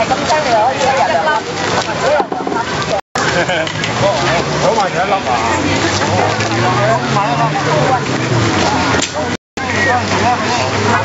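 Throughout these everyday sounds there is gain pumping, likely from input gain set far too high with a fast limiter or compressor clamping down on each loud event. The level swings by around 10 dB, so quiet and loud moments sit close together and the whole recording feels squashed, with the top end of the call-style processing stopping at 8 kHz.

At 3.00 s the audio drops to silence for about 157 ms before resuming at 3.17 s, and at 9.35 s it cuts out again for about 218 ms, returning at 9.59 s. These are Bluetooth stalls, likely caused by interference delaying packets until the headphones' buffer emptied. Playback simply froze until the resent data arrived, so each gap is a clean hole in the sound rather than a crackle or distortion.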